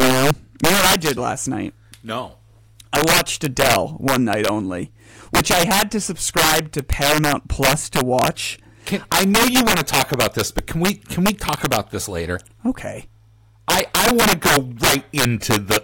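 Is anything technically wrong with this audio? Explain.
Yes. Throughout the speech, integer overflow: about 7 dB of overdrive pushes about 2% of samples past the integer limit, wrapping them to the opposite sign as violent cracks, harsher than clipping's flattened distortion.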